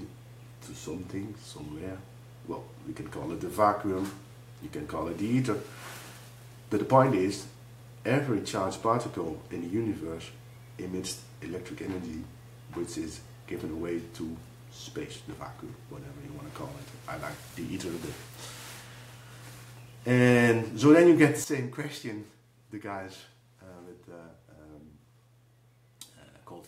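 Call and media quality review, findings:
Sudden gain jump at 21.44 s. Level drops about 12 dB in a single step and holds there to the end. Sound and background noise fall together. Likely a digital gain setting or bit shift applied without a ramp.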